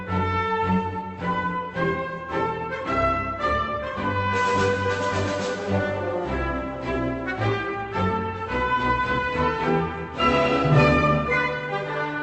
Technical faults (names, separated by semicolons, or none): none